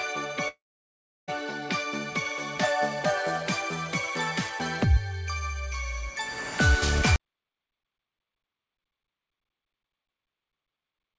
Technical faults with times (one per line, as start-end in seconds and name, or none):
0.48-1.31 long network dropout
7.16-11.19 audio dropout to silence